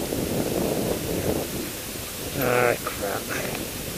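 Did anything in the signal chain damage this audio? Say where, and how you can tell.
Yes. A constant, even hiss sits about 10 dB below the sound throughout, without distortion: low bit depth with dither at sample-format conversion, which fits about 5 bits.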